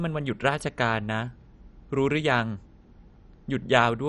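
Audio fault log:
throughout MP2 compression: likely an MPEG Layer II encoder short of bits, consistent with roughly 48 kbps, switching off the upper sub-bands and coarsely quantising the rest. The speech sounds dull, with nothing above 11.3 kHz, and carries a plainly audible gurgling, granular roughness.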